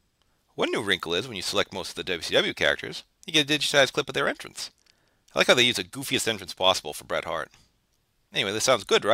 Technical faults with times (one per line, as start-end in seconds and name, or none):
none